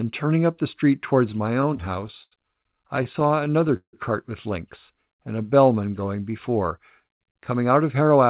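From 1.3 to 2.33 s, just after "turning up the street", packets reach the receiver late, so its jitter buffer keeps running dry. These are repeated stalls (stutter). Across 13 gaps the receiver stretches the last sound to cover about 191 ms, the longest gap being 81 ms. No speech is lost, but the passage hitches and drags in small catches.

A second stutter runs from 2.87 to 3.95 s, ending just before "cart with links and". Here 12 gaps are covered, totalling 274 ms, about a quarter of the span. One gap lasts 166 ms, long enough that the held sound audibly fades before the speech resumes.

From 6.70 to 8.26 s, after "and a bellman going", the buffer is holding more audio than it wants. This triggers a jitter buffer speed-up. The receiver cuts out many short pitch-period slices, roughly 150 ms in all, so the speech plays at 108% speed without any change in pitch and comes across as hurried.

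Throughout the clip the call path passes nothing above 4 kHz, which fits a narrowband telephone codec such as G.711 mu-law.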